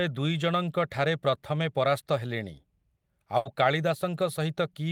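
At 3.37 s, a burst of packet loss: about 80 ms of lost packets are filled by a fading stretch of the last sound, and the speech then resumes with that stretch missing.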